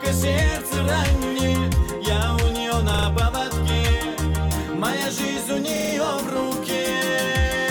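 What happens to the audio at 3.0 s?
A brief stutter from 2.94 to 3.07 s: a repeated buffer, where one 43 ms slice, fitting a 2048-sample buffer, replays three extra times with hard joins because new audio arrived late.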